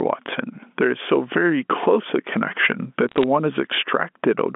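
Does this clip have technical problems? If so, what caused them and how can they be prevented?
Yes. Gain pumping runs through the whole clip, with the level moving over roughly 10 dB and the dynamics sounding squashed. The likely cause is input gain set far too high, with a fast limiter or compressor pulling it down on each loud sound. Setting the microphone gain lower, so the limiter rarely acts, would prevent it.

Bit errors on a digital phone line cause two bursts of sharp ticks and crackle, from 0.31 to 0.35 s and from 3.09 to 3.24 s. They sit on top of the telephone-band speech, which runs from about 200 Hz to 3.5 kHz. Flipped bits in the G.711 stream each corrupt a single sample, and errors in the sign or high bits produce the loudest clicks. Error checking or a cleaner digital link would prevent them.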